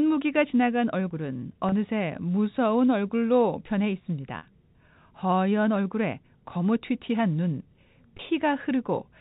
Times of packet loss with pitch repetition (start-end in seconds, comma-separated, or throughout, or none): 1.69-1.72, 4.38-4.43, 8.17-8.19